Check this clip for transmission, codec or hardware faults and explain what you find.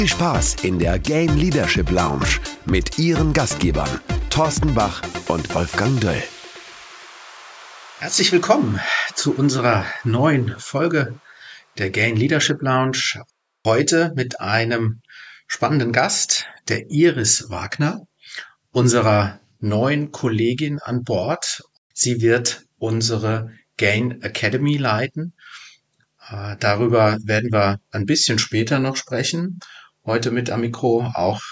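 No transmission, codec or hardware faults can be heard in the clip. Nothing in the audio calls for further explanation.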